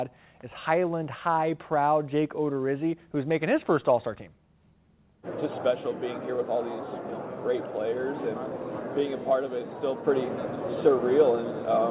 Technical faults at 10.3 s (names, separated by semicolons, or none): none